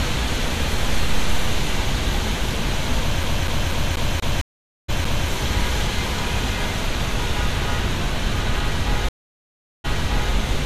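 It's a recording of everyday sounds. From 3.23 to 5.29 s there's a CD stuck on one turn: the same 0.24 s chunk repeats eight times with a tiny mute at each jump, the classic scratch stutter. There are also two stream reconnects. At 4.41 s the audio drops out for 0.47 s and comes back around 0.4 s further along. At 9.09 s it goes silent for 0.75 s and resumes 0.49 s earlier, as if the server resent a burst.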